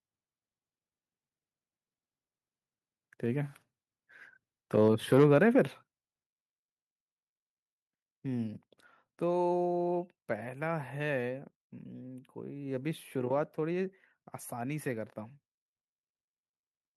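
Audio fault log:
5.24 s microphone volume stepped down: speech and background fall together by about 2 dB in a single instant step, likely the call software lowering input volume, not a gradual fade.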